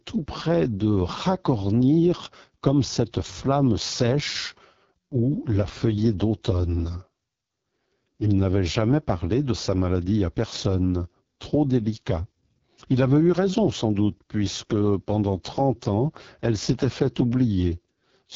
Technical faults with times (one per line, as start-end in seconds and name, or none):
0.00-18.36 AMR wideband (HD Voice) codec